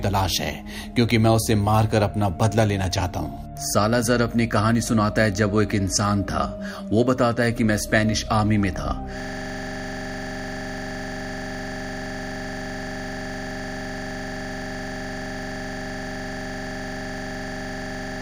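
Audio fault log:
9.20 s to end: system hang loop. The system froze here, but the sound hardware kept replaying the same ring buffer. One slice of audio about 42.67 ms long repeats exactly until the clip ends, 211 times. That fits a 2048-sample buffer. At 23.4 Hz the repeats are too fast to hear as separate events and too slow to merge into a tone. The result is a harsh, rapid rattle that never changes.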